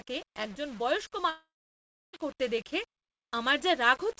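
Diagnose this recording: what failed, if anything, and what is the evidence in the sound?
Sample-format conversion: the whole clip has grainy distortion that tracks the speech and grows harsh on quiet syllables, with noise around 25 dB below the signal. The likely cause is low bit depth without dither, with 7-bit rounding. On a waveform, quiet passages show visible stair-steps. A spectrogram shows broadband grit rising and falling with the speech.

Network: a long network dropout runs from 1.30 s to 2.15 s. The likely cause is lost packets, and about 0.84 s of speech never plays. The receiver first continues the last sound as a fading buzz or hiss, then leaves about 0.65 s of silence before speech resumes mid-stream. On a spectrogram this appears as a smeared, decaying band followed by a blank gap. G.722 coding itself is audible as nothing above 8 kHz throughout.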